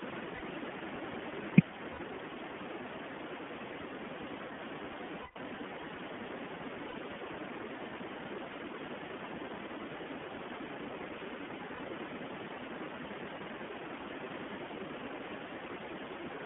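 Throughout, the speech passes through the iLBC codec. The band is cut to about 200 Hz to 3.4 kHz, so a spectrogram shows an empty region above 3.4 kHz. The rough, slightly synthetic texture fits the 15.2 kbps mode with its 20 ms frames.

Lost iLBC frames occur at 0.34, 1.92, 5.22, 6.88 and 11.74 s. These gaps last 60, 80, 140, 60 and 60 ms. In each one, the last pitch cycle is repeated with added noise, which sounds like a brief buzzy held vowel and shows as a periodic stretch in the waveform. Each gap ends with the speech recovering immediately.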